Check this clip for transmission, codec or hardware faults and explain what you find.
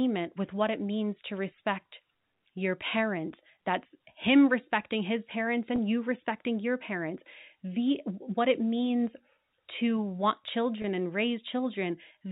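There's one fault: packet loss with pitch repetition, at 5.76 to 5.78 s and again at 10.82 to 10.84 s. Each gap is about 20 ms, which fits a single lost packet. The receiver fills it by looping the last pitch period, so the speech briefly holds a slightly buzzy, frozen tone before carrying on. The narrowband G.711 telephone coding underneath is working as expected.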